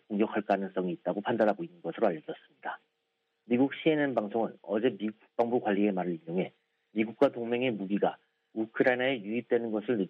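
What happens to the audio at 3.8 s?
Nothing goes wrong at 3.8 s: the audio plays through that moment intact, with no dropout, click or other fault.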